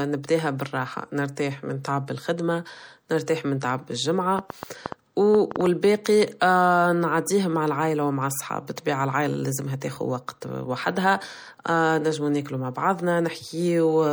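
Throughout the speech there is a watery, swirly quality with smeared attacks. This is likely MP3 compression, at a rate that fits a bitrate around 64 kbps, where weak frequency lines drop in and out from frame to frame. On a spectrogram this shows as patchy, flickering detail. The damage is plainly audible.

From 4.39 to 5.67 s, just after "الخدمة نرتاح من تعب", a train of clicks ticks over the sound. There are about ten similar pulses at an uneven pace, averaging 7.06 per second, and they stand roughly 15 dB above the signal. Likely cause: interference, or a faulty connection or power supply. They appear as thin spikes on the waveform and as vertical broadband stripes on a spectrogram.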